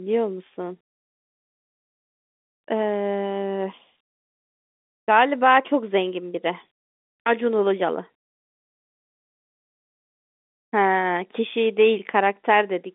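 Nothing here counts as a fault; the speech just has the ordinary G.711 telephone character, with the line band running from about 200 Hz up to 3.6 kHz and nothing above 3.8 kHz, which is exactly what a normal phone line gives you.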